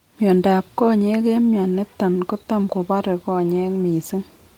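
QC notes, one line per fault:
No audible faults found in this speech recording.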